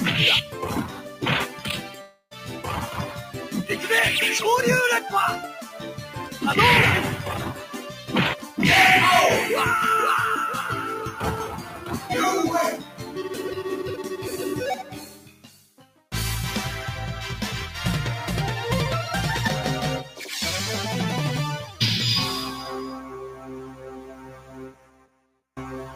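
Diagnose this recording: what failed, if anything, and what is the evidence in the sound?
The level breathes throughout, with steady and sustained parts sinking and recovering by roughly 10 dB while sharp onsets mostly get through. This is a call-processing fault: a noise suppressor meant for speech was left on for this material. It treats held tones, ambience and decaying tails as background noise and pulls them down, so the sound pumps and thins wherever it stops changing quickly.

The sound is cut by the noise suppressor in eight stretches: 0.86–2.66 s, 3.08–3.54 s, 5.59–6.38 s, 7.54–8.58 s, 11.13–12.10 s, 12.78–13.18 s, 14.81–16.06 s and 23.33–25.27 s. In each, sustained or fading content drops by about 7 to 9 dB and tails end early, most heavily in the last two. The suppressor judged these passages as noise because they were steady, and attenuated them harder than the surrounding material.

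From 2.01 to 2.33 s, inside the first suppressed stretch, the real audio is replaced by a fading continuation of the preceding sound that lasts about 0.3 s. A brief silence of about 70 ms follows before normal audio returns, with that portion missing. This points to a long network dropout as the likely cause. No packets arrived, and the receiver's concealment extended the last sound, decayed it to nothing, then resumed once data flowed again.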